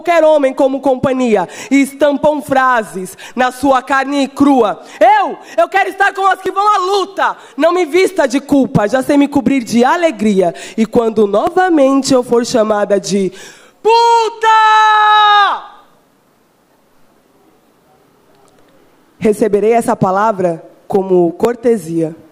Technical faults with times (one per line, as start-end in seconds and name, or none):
1.47-21.45 clock drift buffer slips